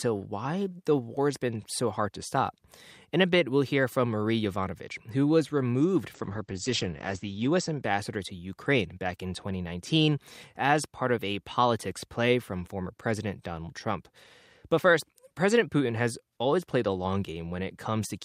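From 6.14 s to 7.89 s a call bitrate drop makes the speech rough and muffled, fitting an encoder squeezed from 64 to 11 kbps. On a spectrogram the band above 8 kHz, reaching 20 kHz before, vanishes flat for 1.34 s, with blotchy texture below.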